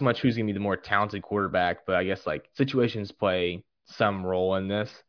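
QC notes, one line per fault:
Nothing stood out on listening to this speech recording.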